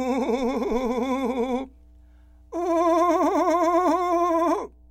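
A ground loop or a nearby transformer is leaking 60 Hz power-line current into the signal path of this music recording, producing mains hum: a steady low tone with some low harmonics, sitting about 30 dB below the music and running unbroken from start to finish.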